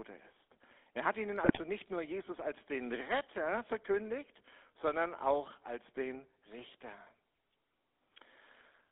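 Throughout, the speech carries the GSM full-rate codec's buzzy, gravelly roughness, plainly audible and confined to a 250 Hz to 3.6 kHz line band; pulse-driven excitation, not mere band-limiting, causes the grit. Between 1.44 and 1.59 s, after "hat ihnen" and before "nicht nur", GSM bit errors corrupt the decoder's filter, pitch and gain values, producing squawks, pops and gargling over roughly seven successive frames rather than a clean dropout.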